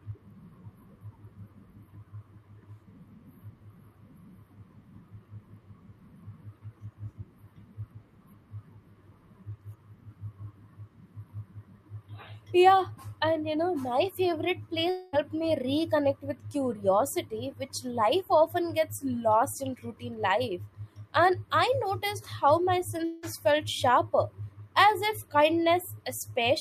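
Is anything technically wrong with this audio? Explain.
Yes. At 14.89 to 15.16 s, right after "you know my favorite", and at 23.05 to 23.26 s, just before "felt sharper as if", the speech smears into a fading buzzy tail and resumes at "me reconnect" and at the second point with a chunk missing. This is a long network dropout. The likely cause is that packets stopped arriving, and the receiver stretched the last sound over the roughly 0.24 s and 0.18 s gaps without going silent.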